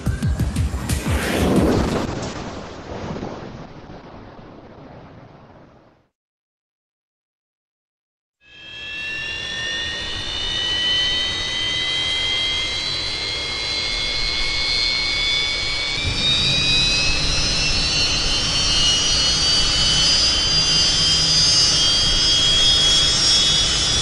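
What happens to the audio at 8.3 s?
At 8.3 s the audio is inside a call bitrate drop lasting from 1.72 to 9.03 s. The encoder's rate falls, pointing to roughly 48 down to 8 kbps, so coding coarsens and the top end is cut above 8 kHz. The result sounds rough, watery or muffled until it clears at 9.03 s.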